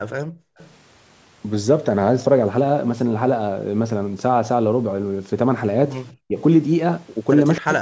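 A speech recording carrying a DC offset for its whole length: the waveform sits shifted off zero by a constant amount. It is inaudible, but it eats into headroom and appears as steady energy at the very bottom of the spectrum, beneath the call processing's normal low-cut. The background is gated by the echo canceller from 0.31 to 0.58 s. The room sound falls away by about 40 dB while the far-end loudspeaker is active, then returns once the canceller releases, so the gap is heard as a brief hole in the ambience. Echo leak follows directly, from 0.58 to 0.73 s, as a faint delayed copy of speech arriving 254 ms late at about 30 dB below the main level. It returns more strongly at 7.57 to 7.61 s, at about 20 dB down. The likely cause is an echo canceller on a loudspeaker endpoint failing to remove everything its microphone captured. Speech is suppressed in double talk from 6.22 to 6.38 s, with the voice dipping by around 40 dB. 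It happens again from 7.58 s to the end, with a similarly deep cut. The likely cause is the canceller being unable to separate the local talker from the echo while both sides spoke, so it attenuated both. Content above 8 kHz is absent throughout, consistent with the call's normal bandwidth.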